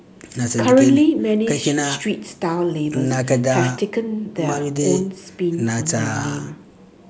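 No technical faults can be heard in this speech; it carries the ordinary shaping of a call microphone chain, with the lowest bass trimmed by its high-pass filter and nothing present above 8 kHz.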